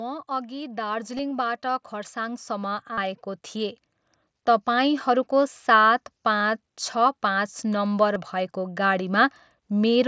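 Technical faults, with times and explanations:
0.27–3.84 s, automatic gain rising: the level climbs steadily by about 11 dB over roughly three and a half seconds as the gain control lifts an input it judged too quiet. Voice and background noise swell together, unlike a speaker simply talking louder.
1.17 s, 2.93–2.98 s, 6.39 s, 8.14 s, concealed Bluetooth headset packet loss: lost headset packets were filled by repeating the best-matching recent waveform. The 15 ms gaps are nearly hidden. The 45 ms gap buzzes as a full-level held tone, then warbles as real audio returns, rather than dropping to silence.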